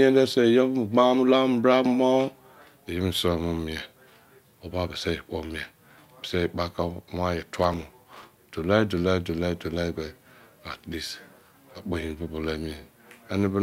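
After "wan ye", 7.57 to 8.52 s brings processor overload crackle: dozens of short buffers miss their deadline, leaving silent gaps heard as gritty tearing.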